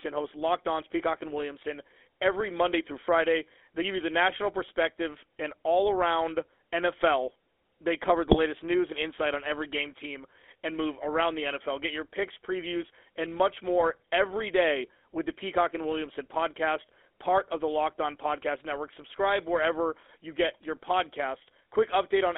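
Throughout, the GSM full-rate codec confines the speech to roughly 300 Hz to 3.5 kHz and adds a buzzy, gravelly roughness from its pulse-driven excitation, consistent with 13 kbps coding. From 8.26 to 8.38 s, between "they cover" and "news and insight on", GSM bit errors corrupt the decoder's filter, pitch and gain values, producing a brief squawking, gargling burst.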